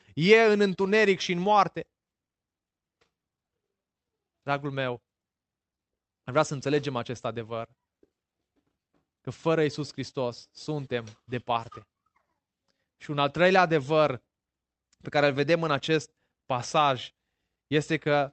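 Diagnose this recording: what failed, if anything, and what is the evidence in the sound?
Nothing failed: the speech came through the call path without any audible fault.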